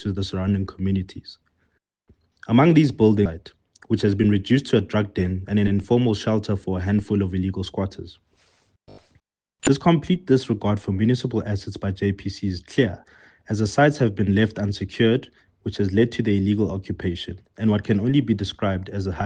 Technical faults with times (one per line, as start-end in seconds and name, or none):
3.25-3.38 skip ahead
3.78-5.05 jitter buffer speed-up